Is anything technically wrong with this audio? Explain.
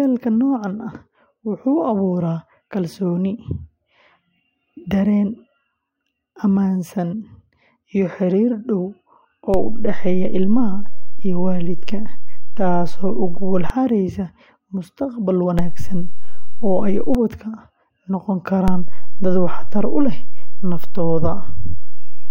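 Yes. The speech has three DC steps, at 9.54 to 13.7 s, 15.59 to 17.15 s, and 18.68 s to the end. Each time, the waveform's zero line jumps to an offset of about -10, -9 and -7 dBFS. Each jump lands as a low thump, and the speech carries on unchanged.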